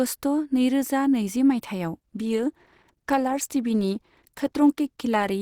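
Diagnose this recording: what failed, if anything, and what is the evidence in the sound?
From 2.01 s to the end, the speech abruptly shows more codec artefacts, with no gap at the switch. This is an adaptive stream at a lower bitrate, a network-driven step down in the codec, consistent with Opus falling from about 64 to 16 kbit/s.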